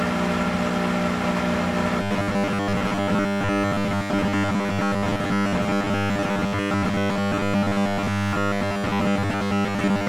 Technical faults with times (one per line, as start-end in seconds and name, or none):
2.02-10.08 robotic sound from repeated short buffers